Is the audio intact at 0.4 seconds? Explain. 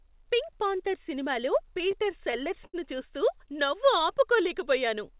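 Yes, the speech at 0.4 seconds is intact, coming through the call path as expected with nothing heard above 4 kHz.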